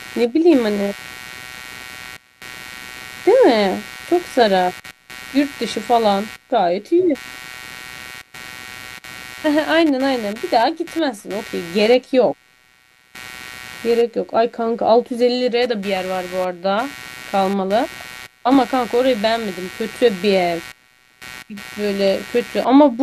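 From start to finish there's computer activity noise, a buzzy chirp pulsing around 150 Hz, roughly 20 dB under the speech, riding on ground shifts from processor and peripheral load.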